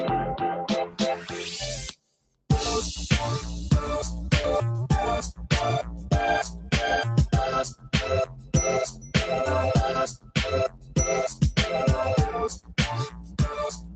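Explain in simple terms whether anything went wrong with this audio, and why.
Something did go wrong. A noise suppressor applied to music or sounds was left running. It was built for calls, so it mistakes steady tones, room ambience and fading tails for background noise. It keeps pushing them down. Sharp starts get through, but anything held or fading keeps sinking and coming back. The level swings the whole way through, so the sound pumps and thins out. The call's normal microphone filtering and codec are also present, but those are not faults.

There are also four places where sound was cut by the noise suppressor. Here it judged the sound to be noise and pulled it down much harder than elsewhere. It happens at 1.9 to 2.47 seconds, 7.69 to 9.15 seconds, 10.09 to 11.42 seconds, and from 12.49 seconds to the very end. In the first stretch about half a second is hit. In the middle two, about 0.7 seconds of each is. 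Steady or decaying parts drop sharply or get cut short, and quick, sudden sounds mostly survive.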